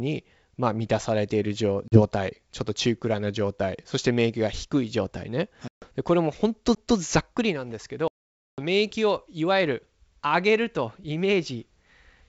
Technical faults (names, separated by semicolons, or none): packet loss on an ADPCM call; CD skip